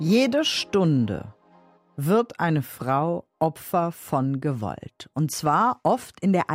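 No technical faults can be heard in this clip.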